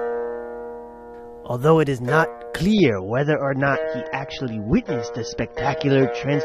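From 2.73 s to the end, an adaptive stream at a lower bitrate takes over as the connection slows, which fits a switch from about 96 kbit/s to 24 kbit/s AAC. The sound changes abruptly without a gap, losing everything above 6.3 kHz and turning dull, with coarser codec artefacts.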